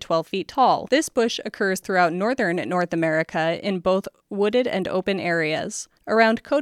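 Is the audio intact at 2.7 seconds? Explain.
Yes, the speech at 2.7 seconds plays through intact, with no dropout, click, distortion or other fault at that moment.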